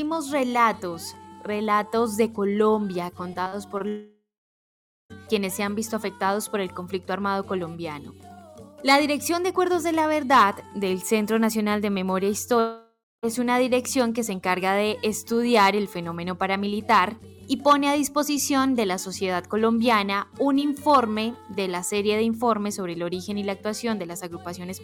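From 3.33 to 3.82 s the sound turns choppy and robotic, with small pieces missing. This is repeated packet loss: four short gaps, the longest 43 ms, were each bridged by stretching the preceding sound, so about 17% of that half-second is patched filler.

Right after, from 3.88 to 5.12 s, the sound smears into a fading buzz and then drops to silence for about 0.8 s before resuming. That is a long network dropout, likely about 1.2 s of audio that never arrived, with the receiver extending the last sound until it gave out. A shorter one follows at 12.60 to 13.25 s: roughly 0.64 s is likely lost, the fill decays, and about 0.22 s of silence precedes the return.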